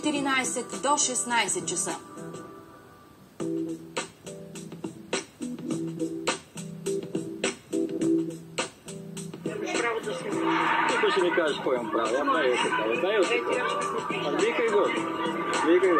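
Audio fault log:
No faults were detected in this clip. There is nothing to enter in this log.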